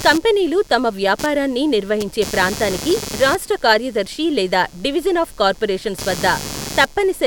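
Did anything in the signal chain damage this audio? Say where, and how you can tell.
Yes. A buzzing, chirping texture runs under the speech for the whole clip, pulsing at around 150 times a second and sitting only about 15 dB below the speech. It rises and falls independently of the talking, following the computer's activity rather than the sound. This is computer activity noise in the analogue wiring: shifting processor or graphics load disturbs the shared ground, and that current leaks into the audio input.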